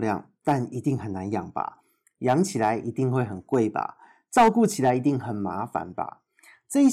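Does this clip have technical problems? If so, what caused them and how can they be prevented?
Yes. Hard clipping occurs at 0.48–0.53 s, 2.29–2.70 s, 3.17–3.56 s, 4.37–4.90 s, 5.76 s and 6.85–6.88 s. The speech peaks exceed what the recording chain can pass, from just reaching the limit at 5.76 s to about 9 dB over at 4.37–4.90 s. Their tops are sliced flat, adding harsh upper harmonics that are heard as crackle and fuzz. Lowering the input gain so peaks stay safely below full scale would prevent it.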